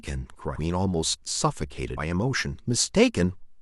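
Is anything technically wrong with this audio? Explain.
Yes. At 1.97 s, compressed frames are skipped: about three 32 ms frames never reach the output, so the speech jumps forward by roughly a tenth of a second. The join shows as a waveform discontinuity.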